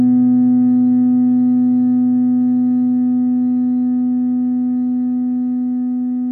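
No technical faults can be heard in this audio.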